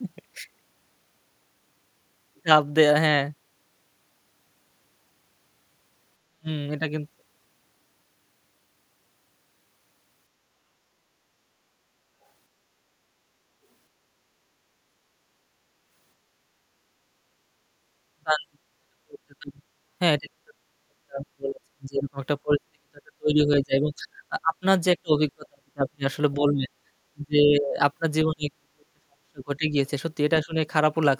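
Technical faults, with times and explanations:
6.19–6.48 s, 18.15–19.68 s, 20.19–24.64 s, 25.02–27.79 s, 28.26–29.80 s, 30.43–30.57 s: speech suppressed in double talk. The speech ducks by about 40 dB, and only about 15 dB at the end, in broken pieces, likely because an echo canceller mistook overlapping talk for echo.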